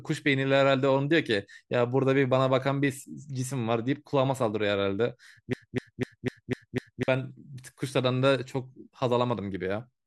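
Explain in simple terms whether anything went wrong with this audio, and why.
Broken-record loop, 5.53 to 7.08 s: a quarter-second snippet repeats six times, likely because playback stalled and kept resending it, so the speech there is lost.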